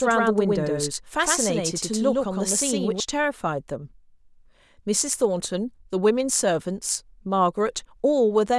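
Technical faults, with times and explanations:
0.0–3.0 s, doubled audio track: the speech is already doubled when the clip opens. A second full-band copy runs roughly a tenth of a second behind at about the same level, so every syllable gets a hard, flat echo with no decay or room colour. It ends abruptly at 3.0 s, leaving a single clean track. The cause is likely the same signal being picked up again through a slower path, or an edit leaving two offset copies.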